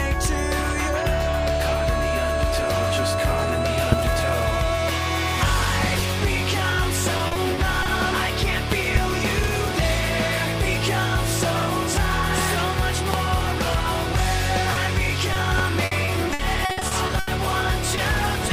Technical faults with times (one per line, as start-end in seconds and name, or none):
3.92-3.95 loud pop
7.17-7.87 repeated packet loss (robotic sound)
8.72-8.98 loud pop
13.14-13.36 loud pop
14.73-14.77 short concealed packet loss
15.33-15.37 short concealed packet loss
15.58-15.61 loud pop
15.85-17.29 repeated packet loss (robotic sound)
17.95-17.99 short concealed packet loss